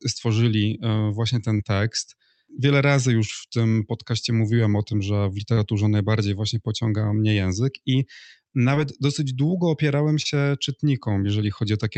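Short concealed packet loss four times, at 1.57 s after "stworzyli e właśnie", 5.53 s before "najbardziej właśnie pociąga mnie", 8.75 s before "dosyć długo opierałem", and 10.22 s: 20 to 40 ms of audio arrived too late, and the receiver extended the preceding sound, leaving brief smears or wobbles.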